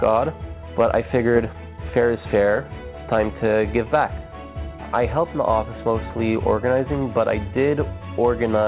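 Nothing here counts as a fault: the audio simply has the narrow, phone-call character of a normal call path, with nothing above about 4 kHz, just what you'd expect from a standard narrowband telephone codec doing its ordinary job.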